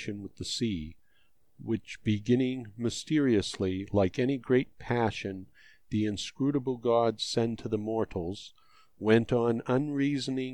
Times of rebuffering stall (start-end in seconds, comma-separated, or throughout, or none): none